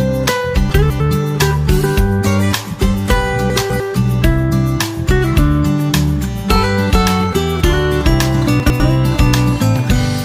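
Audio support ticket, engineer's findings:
Chunks out of order at 0.7–1.0 s, 3.5–3.8 s and 8.6–8.8 s: short jumbled bursts. A 100 ms block lands two blocks late (one late at 8.6 s). Nothing's missing, just reshuffled. Probably the jitter buffer or write queue reordering.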